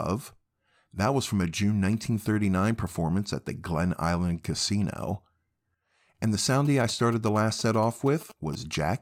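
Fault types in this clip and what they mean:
GSM signalling bursts: a nearby 2G phone's radio bursts rectified by the audio circuit, heard from 6.65 to 8.55 s as galloping ticks and 217 Hz buzz, roughly 20 dB below the speech.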